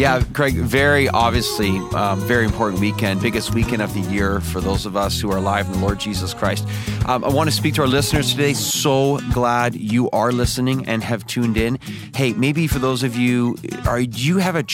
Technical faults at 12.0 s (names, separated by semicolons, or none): none